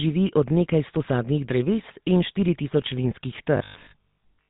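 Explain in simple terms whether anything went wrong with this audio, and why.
The whole speech clip has been through the GSM full-rate codec, the old mobile-phone voice coder. It rebuilds the voice from a simplified model driven by pulses and cuts everything above about 3.8 kHz, so the voice sounds muffled, buzzy and gravelly throughout.

From 3.57 s to the end at 4.49 s, the voice turns into a rigid, metallic robotic sound from repeated short buffers. A steady 50 Hz buzz runs through it, which fits the same 20 ms chunk being replayed. The likely cause is audio arriving too slowly, so most of this stretch is filled with repeats.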